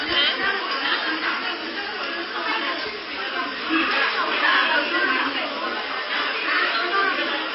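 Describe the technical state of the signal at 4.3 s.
At 4.3 s, as throughout the clip, plainly audible MP3 compression, likely at a very low bitrate around 24 kbps, makes the sound watery and swirly. A spectrogram shows nothing above 5.6 kHz and weak bands flickering on and off.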